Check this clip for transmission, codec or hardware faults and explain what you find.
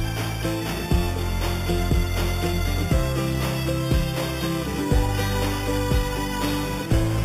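There's one fault, running through the whole clip: imaging from sample-and-hold upsampling. The sound points to an 8 kHz original raised to 44.1 kHz by simply repeating samples, unfiltered. That leaves a mirrored copy in the 4 to 8 kHz band, about 17 dB down, heard as a bright metallic fizz that tracks the sound's level.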